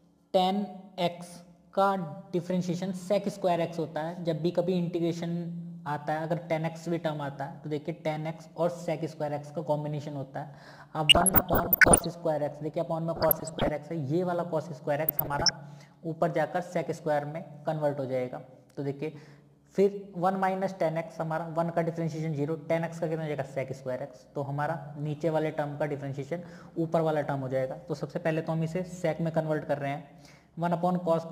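Short blips of noise break out over the sound from 11.07 to 12.06 s, 13.16 to 13.69 s and 15.08 to 15.51 s: DAB burbling, where weak reception lets bit errors, here around 0.5 to 0.7 percent, slip past error correction and corrupt MP2 sub-band levels frame by frame.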